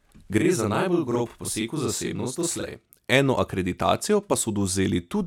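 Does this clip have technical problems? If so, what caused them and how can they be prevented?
Yes. From 0.38 s to 2.90 s there is a channel delay (doubling): one channel runs 40 ms behind the other, and the two are then summed to mono. At 40 ms the late copy is too far apart to fuse with the original, so the speech is heard twice at equal level, a thickened doubling with a short slap trailing each syllable, until the channels line up again. To prevent it, keep both channels on a shared clock and buffer path, and check inter-channel alignment before any mono fold-down.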